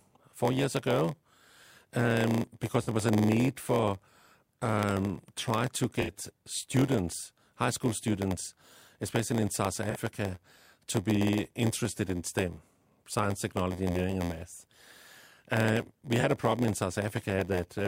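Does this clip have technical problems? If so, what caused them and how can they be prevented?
Yes. A steady 86.1 Hz buzz runs under all the speech, which drags 0.938 times slow at normal pitch. This is block size mismatch (padded): a writer fills only part of each 512-sample read block, and zero gaps fill the rest. Prevent it by matching block sizes at every stage boundary.

Brief smeared, phasey patches come from AAC frame loss with concealment. The decoder patches lost frames from the last good spectrum at 2.83–2.89 s between "um because" and "was a need for", at 6.01–6.12 s between "for um try to" and "students high school students", at 9.90–9.97 s, and at 16.20–16.24 s before "a problem in". Prevent it with reliable transport, retransmission or forward error correction.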